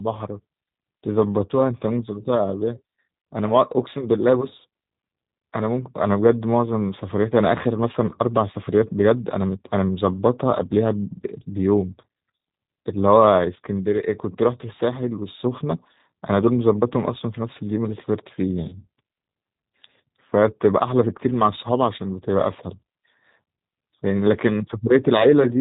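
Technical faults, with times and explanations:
Throughout, G.729 codec: the speech has that slightly rough, synthetic edge of a voice rebuilt from a vocal tract model and a few pulses per frame, which fits an 8 kbit/s stream. Nothing comes through above 3.8 kHz, so it sounds narrow and boxy.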